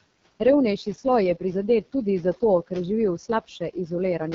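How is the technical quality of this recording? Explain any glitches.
Technical quality is poor: heavy codec damage runs through the whole recording, with room noise sitting about 21 dB below the speech.

AMR wideband (HD Voice) codec, throughout: The speech passes through an AMR-WB coder squeezed to its lowest mode; the roughness fits a rate near 6.6 kbit/s. At that rate the pulse-driven model of the vocal tract can't follow the speech closely, so voiced sounds come out rough and raspy. The top band is synthetic noise, and nothing is present above 7.3 kHz.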